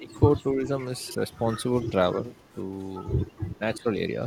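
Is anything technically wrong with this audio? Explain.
Yes. Three separate problems show up in this speech recording.

Speech suppressed in double talk occurs from 0.0 to 0.19 s, from 0.53 to 0.72 s, and from 3.78 to 3.86 s. This is likely an echo canceller that could not tell the near talker apart from loudspeaker echo while both sides were talking, so it pulled everything down. The voice dips by about 10 dB in the first stretch, about 5 dB in the second, and about 15 dB in the brief last one. It sounds briefly muffled or partly gated.

Echo leak turns up at 0.09 to 0.14 s, 1.28 to 1.38 s, 1.78 to 1.9 s, 2.35 to 2.52 s and 3.26 to 3.58 s. Each time a faint copy of the voice trails 264 ms behind the original. The likely cause is a loudspeaker pickup that the far end's canceller did not fully remove. The leak is strongest near 1.8 s, at about 20 dB below the speech, and barely audible near 2.4 s, at about 40 dB down.

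Chunks out of order affect 1.07 to 1.15 s. A block of about 43 ms arrived one slot late and played after the block that should have followed it. No audio is missing, but the three hard joins this creates produce a short jumbled stutter.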